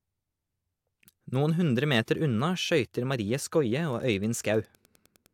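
Wi-Fi interference starts at 3.87 s and runs to the end. A nearby Wi-Fi radio's beacon is picked up and rectified by the audio circuit. It repeats every 102.4 ms, giving steady ticking about ten times a second. The ticks are faint, well below the speech.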